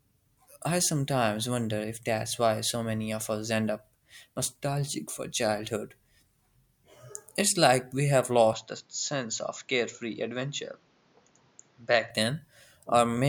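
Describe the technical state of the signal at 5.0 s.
At 5.0 s the speech signal is intact, with no dropout, clipping, glitch or other fault audible at that moment.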